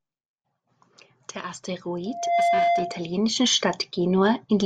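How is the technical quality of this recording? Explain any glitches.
The recording has one clear fault, a loudspeaker feedback squeal from 2.05 s to 3.18 s. A microphone is picking up the loudspeaker it feeds, and around 692 Hz the loop gain goes above one. That tone feeds on itself, swelling over roughly a third of a second until it sits a few decibels above the speech. Unlike a steady interfering tone or mains hum, it visibly grows from nothing before holding, which marks it as feedback.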